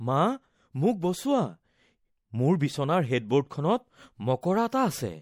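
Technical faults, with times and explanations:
Throughout, MP3 compression. The speech sounds watery and swirly, with dulled treble and smeared onsets. The likely cause is lossy coding at a low rate, one that fits about 64 kbps. Short of bits, the encoder cuts high frequencies and lets weak components flicker between frames.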